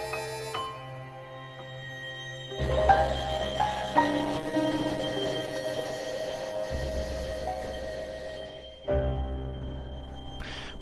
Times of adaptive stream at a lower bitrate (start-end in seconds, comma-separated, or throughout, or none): 2.60-10.81